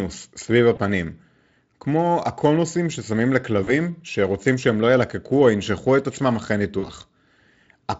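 At 0.75 s, again from 3.63 to 3.74 s and from 6.79 to 6.89 s, the audio shows VoIP packet loss concealed by the speech codec. The decoder filled gaps of about 20 ms and then 40 ms, which fits one and then two lost 20 ms frames. It did this by repeating its last pitch and spectral shape at falling gain. Each gap sounds like a brief stretched smear, a buzzy tone or a coloured noise that fades, with a weak recovery. On a spectrogram, the harmonics run flat and fade. The waveform shows near-identical cycles that shrink in amplitude. The Speex coding itself adds only faint damage.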